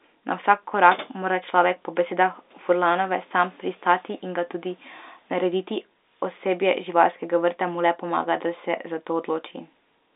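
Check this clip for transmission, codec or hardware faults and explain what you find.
No transmission, codec or hardware fault is audible: the speech comes through an ordinary G.711 telephone channel whose band runs from about 300 Hz to 3.7 kHz with nothing above 3.8 kHz, a sound consistent with 64 kbps A-law coding, and any quantisation noise it adds is faint at most.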